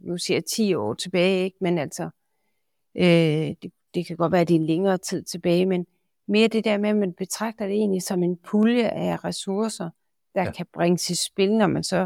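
Periodic USB or driver dropouts run from 0.14 s to 11.63 s, repeating every 0.5 s. Something stalls the audio path at a fixed interval, and a tiny slice, roughly a tenth of a millisecond, is skipped each time. This leaves regular ticks that sound only while speech is present.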